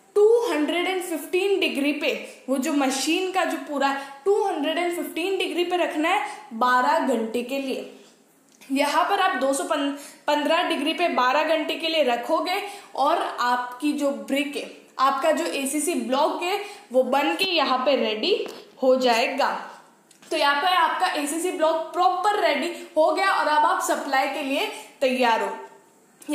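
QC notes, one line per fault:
No fault found.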